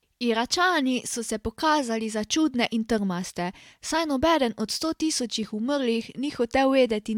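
Nothing in this speech recording points to a technical fault at any point.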